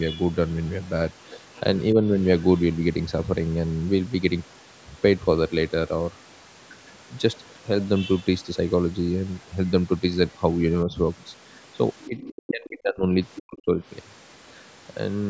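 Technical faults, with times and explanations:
0.49–0.89 s, 1.24–1.80 s, 2.39–2.75 s: other side's voice leaking through, faint second voice about 25 to 35 dB under the speech, likely loudspeaker echo the canceller left in.
10.85–10.93 s: speech suppressed in double talk, a brief dip of about 5 dB, likely the echo canceller ducking the talker while both sides spoke.
12.03–12.51 s: other side's voice leaking through, a second voice only about 10 dB below the speech, likely residual echo escaping cancellation.
12.08–13.83 s: speech suppressed in double talk, the talker drops by up to about 30 dB over roughly one and a half seconds, likely the canceller attenuating both voices during overlap.
13.35–13.40 s and 14.48–14.63 s: other side's voice leaking through, short scraps about 20 and 40 dB down, likely leftover loudspeaker echo.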